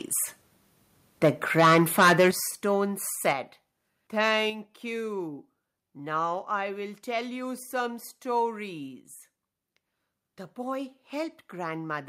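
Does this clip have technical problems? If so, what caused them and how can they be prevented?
Yes. Microphone overload: the input volume was likely set too high, so peaks hit the converter's limit and had their tops cut off. From 1.58 to 2.29 s, about 12 dB over, a large share of the waveform clips and sounds harsh and crackly. A brief 2 dB overload follows at 3.29 to 3.31 s. Preventing this means lowering the microphone input volume so the loudest syllables stay below full scale.

Microphone volume stepped down: the call software likely detected clipping and cut the device's input volume in single steps. Voice and background drop abruptly, by about 8 dB at 2.31 s, about 4 dB at 3.33 s and about 5 dB at 4.5 s. Setting a sensible input volume beforehand, or disabling automatic microphone adjustment, stops these sudden drops.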